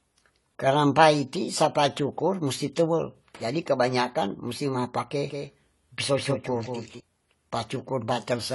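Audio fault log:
Throughout, AAC compression: the speech has plainly audible codec damage, with nothing above 11.5 kHz, so it sounds dull and lacks air. The likely cause is AAC-LC coding at a low rate, which fits a bitrate of about 32 kbps. The encoder splits each frame into frequency lines and quantises them against a hearing model. At this rate it lowers the cut-off and spends too few bits on the remaining bands, which smears the detail.
5.30 to 7.00 s, doubled audio track: a second full-band copy of the speech runs around 200 ms behind the original, at about 5 dB lower. Because the copy has no decay or room colouring, it sounds like a distinct slapback rather than reverb. It cuts in and out abruptly at each end of the span. This is likely caused by the same signal being captured twice, once through a slower path, or by an edit leaving two misaligned copies mixed together.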